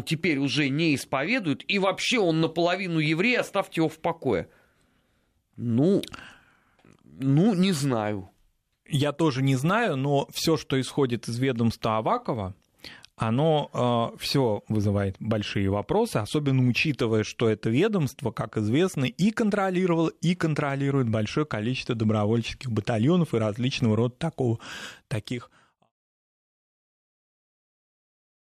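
No technical faults are audible.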